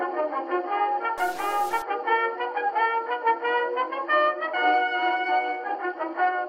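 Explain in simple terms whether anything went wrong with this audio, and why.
From 1.18 to 1.82 s, the music turns harsh and buzzy. This is a stuck bit. One binary digit in each sample likely got stuck, from a broken connection or converter. About half the sample values then come out slightly wrong, which adds a rough buzz.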